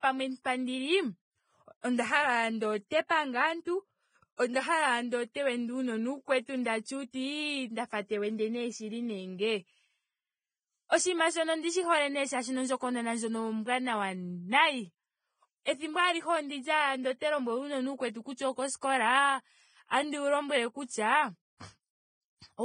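A speech recording carries coarse, smeared low-bitrate codec artefacts from start to finish, even though the file is an MP3 whose size suggests a generous high bitrate. This is most likely low-bitrate audio saved at a high bitrate: the damage points to an earlier pass through a very low-bitrate codec, roughly 20 kbit/s, later re-encoded at high quality. The second encode preserves those losses rather than adding its own, which distinguishes this from a file that was simply encoded once at a low bitrate.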